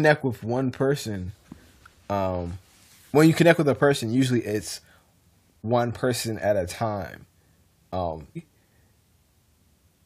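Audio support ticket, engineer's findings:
Jump in the speech at 8.35 s, with a short blip at the splice. Continuity breaks abruptly and the audio resumes further ahead. Likely a stream segment skipped: one segment failed to load, and the player moved straight on to the next.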